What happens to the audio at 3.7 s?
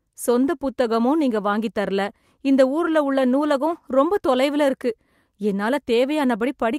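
Nothing goes wrong at 3.7 s: the speech carries on intact through that moment, with no dropout, click, distortion or other fault.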